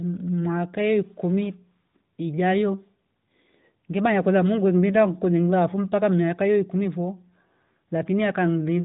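Nothing stood out on listening to this speech, which comes over the AMR narrowband mobile codec path at 12.2 kbps with nothing heard above about 3.8 kHz.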